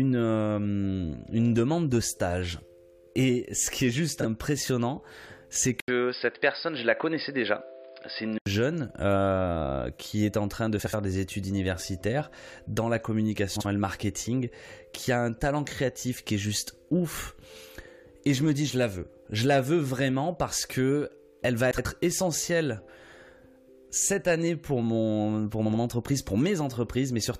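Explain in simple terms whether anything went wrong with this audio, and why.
Frames out of order occur at 4.2 s, 10.8 s, 13.6 s, 21.7 s and 25.7 s. At each point, two short neighbouring chunks of audio were played back in swapped order. The chunks are about 23, 70, 46, 70 and 46 ms long. Each one sounds like a brief garbled flutter. Nothing is missing. The same audio is just briefly scrambled.

Input switched to a poorer device, from 5.80 to 8.46 s. There is a gap of about 80 ms at the switch, and then the sound turns dull and muffled. Nothing above 5.1 kHz comes through, and there is a faint new background noise. The loudness stays about the same. The likely cause is that the recording briefly moved to a lower-quality microphone or headset before returning to the original one.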